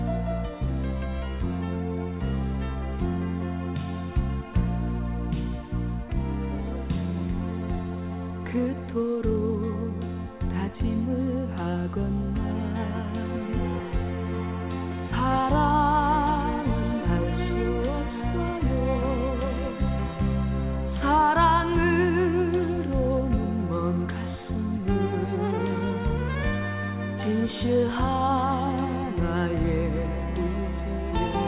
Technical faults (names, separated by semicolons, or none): none